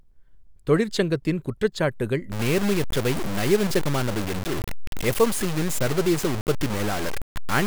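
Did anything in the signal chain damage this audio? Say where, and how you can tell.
Yes. From 2.32 s to the end, the speech turns grainy, with a harsh distortion that rises and falls with the signal, sitting only around 10 dB below it. Quiet stretches sputter or drop to nothing. That's low bit depth without dither, likely from a sample-format conversion that truncated to very few bits, which fits roughly 4, with no dither. The error tracks the waveform, so it sounds like grit on the voice rather than steady hiss.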